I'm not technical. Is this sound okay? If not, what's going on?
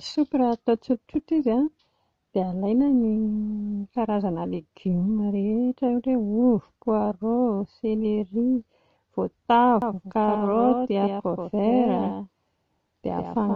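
No. From about 9.82 s to the end, the speech is heard twice, a doubled audio track. A slightly quieter copy trails roughly 150 ms behind, with no echo tail. It likely comes from the sound being captured a second time through a slower path.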